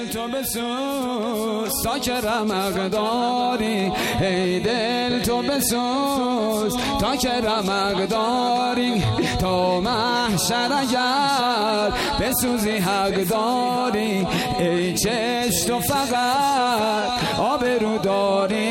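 Nothing here trips a fault, so there's no technical problem to walk through in time order anywhere in the audio.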